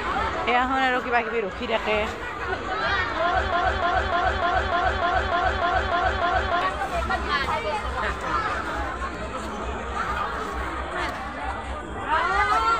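From 3.53 to 6.62 s the audio falls into a broken-record loop: a fragment about 0.3 s long plays back to back ten times, and whatever should have been heard in those three seconds never arrives. This is likely a stalled player or stream re-sending its last buffer. On a spectrogram the stretch shows as a strip of identical blocks tiled at a fixed 0.3 s spacing, and the waveform repeats sample for sample.

A loud pop follows at 7.44 to 7.47 s, standing about 10 dB above the surrounding sound, and a second, weaker one at 9.15 to 9.17 s, about 5 dB above it. In both, the ongoing audio continues underneath. Each is likely a voltage transient, such as from a switch, static or a driver glitch, briefly shaped by the downstream circuitry. On the waveform each appears as a single sharp spike. On a spectrogram each is a thin vertical line spanning the whole frequency range.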